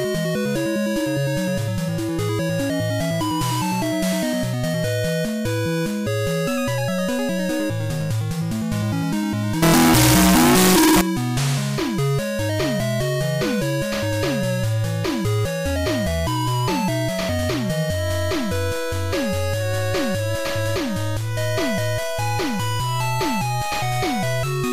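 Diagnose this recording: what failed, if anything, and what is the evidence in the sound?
The failure sits at the sample-format conversion stage: from 9.62 s to 11.01 s the audio turns abruptly very loud and harsh, with a near-square waveform held at an almost fixed, high level and the background noise as loud as the wanted sound, while pitch stays traceable. That is the signature of float read as integer. It is likely that 32-bit float samples were interpreted as 32-bit integers, so the sign and exponent bits, not the true level, set each value.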